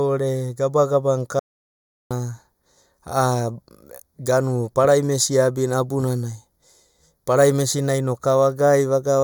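From the start and for the whole length of the speech, a channel delay causes comb filtering. One channel runs late by a fraction of a millisecond, around 0.2 ms, and when the two are combined to mono, the shared content cancels at regularly spaced frequencies. The first notch sits near 3 kHz, with further notches above it, so the upper presence range is hollowed out. The result is a thin, phasey, dulled tone that stays fixed throughout.

At 1.39 s the signal stops abruptly in an audio dropout to silence, returning at 2.11 s. The gap lasts about 0.71 s and is silent, with no room tone or noise floor underneath, and the speech from that stretch is missing entirely. The hard cut on both edges points to the input being lost while recording continued, likely a momentary disconnection, failed link or accidental mute, with the recorder filling the interval with silence.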